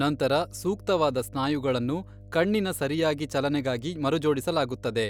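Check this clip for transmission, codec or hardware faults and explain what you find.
Mains hum runs through the whole recording. A ground loop or nearby transformer leaks the 50 Hz power line into the signal, giving a steady low drone roughly 20 dB below the speech. A spectrogram shows a constant line at 50 Hz, with some low harmonics above it.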